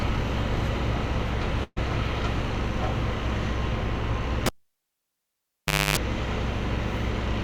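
A sound recording with two faults. At 1.63 s there is a burst of packet loss lasting until 1.78 s. Packets were lost or never arrived in time. The receiver stretched the last sound for about 129 ms, fading it as the gap grew. About 30 ms of near silence follows. The audio then picks up further along, with about 120 ms of the original sound missing. From 4.46 s to 5.97 s the cable was pulled and plugged in. A pop marks the break. About 1.46 s of near silence follows. Near the end comes a 50 Hz mains buzz lasting about 0.27 s, heard while only the plug tip touches. A second pop brings the sound back.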